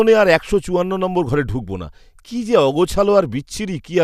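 Nothing goes wrong anywhere in this speech recording, so there's no technical fault to point to at any moment along the way.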